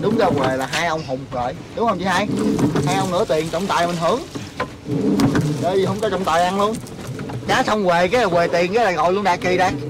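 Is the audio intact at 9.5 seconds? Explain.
No. At 9.5 seconds, as throughout the clip, the loudest moments carry a harsh, crackling fuzz. This is hard clipping: the signal is driven about 11 dB past what the stage can pass, so a few percent of samples have their peaks sheared flat, adding high harmonics.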